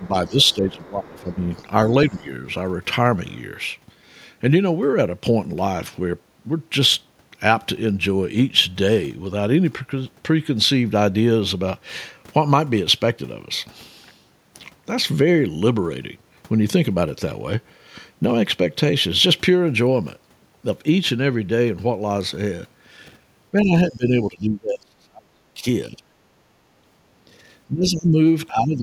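From 0.0 to 1.53 s the speech dips and breaks up by as much as about 15 dB for roughly a second in total. This is speech suppressed in double talk, likely the echo canceller turning down both the local talker and the loudspeaker echo while both sides talked. On a waveform the envelope is notched, and a spectrogram shows the upper harmonics thinning.

Over almost the same span, 0.02 to 1.56 s, the other side's voice leaks through faintly, about 30 dB under the speech. The likely cause is residual loudspeaker echo that the canceller left in the microphone signal. It returns at 2.09 to 2.25 s and briefly at 3.29 to 3.36 s, both around 35 dB down. A spectrogram shows these as faint, separate harmonic traces beneath the main speech.

A short suppression of about 10 dB occurs at 2.1 to 2.27 s. From 23.51 to 26.03 s the drop is far deeper, around 30 dB, and adds up to roughly two seconds. The waveform there shows clear gaps.

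At 26.31 to 26.85 s the background is gated by the echo canceller. The room tone falls by about 8 dB for around 300 ms while the loudspeaker plays, and then it recovers. It shows as a brief band-wide dimming of the noise floor.

Double-talk suppression comes back from 27.67 s to the end, with drops of about 15 dB and roughly 0.7 s affected.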